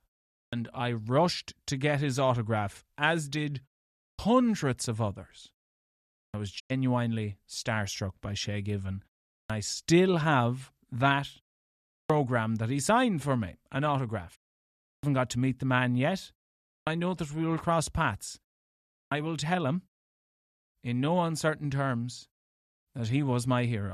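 At 0.37, 4.05 and 6.2 s, speech begins abruptly without its first sounds, about 0.14 to 0.16 s swallowed each time. These are clipped starts after a pause: the output device slept and needed time to wake. At 6.58 s the sound fades out over 20 ms and stays silent until 6.72 s, losing about 96 ms. This digital broadcast dropout fits four corrupt frames muted by the receiver. The clipped starts recur at 9.36, 11.96, 14.88, 16.73 and 18.97 s.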